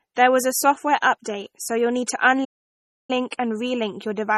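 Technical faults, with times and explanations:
Throughout, low-bitrate audio saved at a high bitrate: the speech carries the smeared, swirly texture and thin, watery sibilants you get from a very low-rate MP3 pass, which fits an original around 32 kbit/s, yet the file itself sits at a much higher rate, around 256 kbit/s. That's the likely cause: the later, generous encode just copied what the first one had already thrown away, so it couldn't bring any detail back.
2.44 to 3.10 s, playback stall: right after "so you'll need to", the output drops to silence for about 0.64 s and then carries on. It's a clean hole in the middle of the phrase, not a fade or a glitchy burst, and that points to the player running dry on data or having its thread blocked for a moment. That's the likely cause: the audio was there, it just couldn't reach the output until things caught up again.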